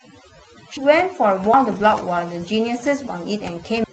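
Throughout the speech, overdone noise removal leaves the background near silent with twinkling specks. That steady processing character is different from momentary damage. At 0.77 s the sound jumps forward, with roughly a third of a second of sound missing. The same happens at 1.54 s and 3.84 s, each skipping about half a second. This is likely a dropped buffer (overrun): samples were overwritten before being read, so the audio splices straight across with no silence. From 1.71 to 2.01 s, and briefly at 2.73 s, the sound turns rougher and noisier without any gap or skip. This is lost packets rebuilt from error correction, where low-bitrate copies carried in later packets fill in what was lost. Across the first stretch this fits several separate losses, and the second fits a single 20 ms frame. These passages sit on top of the Opus call path's ordinary coding noise and its band limit of about 8 kHz.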